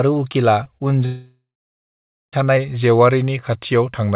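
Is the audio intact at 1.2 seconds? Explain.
No. At 1.2 seconds the speech sits inside what sounds like a long network dropout running from about 1.05 to 2.34 s, likely from packets that never arrived. The receiver stretches the last sound into a fading buzz, then roughly 0.9 s of silence follows until speech resumes with that stretch missing. A waveform shows the decaying concealment tail, then a flat line. A spectrogram shows smeared energy, still capped at 4 kHz by the G.711 call path, then an empty band.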